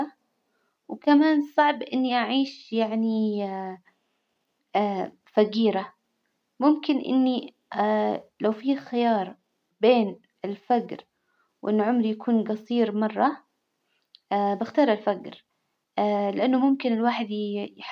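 No technical faults can be heard anywhere in this speech recording. Nothing breaks into the sound at any point, and it needs no timeline of problems.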